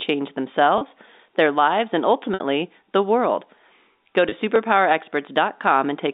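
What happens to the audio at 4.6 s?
At about 4.56 s there's an overlapping-chunks glitch in the speech. The chunk, roughly a second long, starts before the previous one finished, so about 7 ms plays twice at the join, heard as a quick click or tiny stutter.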